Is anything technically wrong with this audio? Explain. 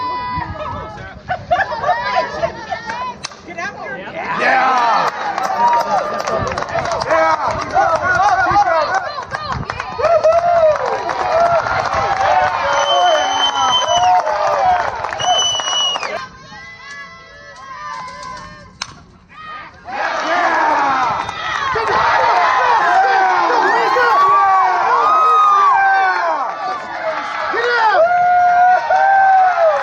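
Yes. Gain pumping runs throughout. The gain is likely set far too high, so a fast limiter clamps down on every loud sound. The gain swings by roughly 10 dB under each peak, leaving the dynamics flattened and squashed.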